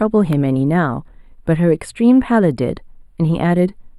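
Channel delay (comb filtering) runs through the whole speech clip. One channel arrives a tiny fraction of a millisecond late, a few samples at most. Summed to mono, the shared content cancels at evenly spaced frequencies. The first notch sits near 7 kHz, so the top end sounds thin and slightly phasey.

At 0.33 s a sharp snap sits on top of the speech. It is extremely brief. This is likely an electrical switching spike, from a nearby switch or discharge coupling into the audio line.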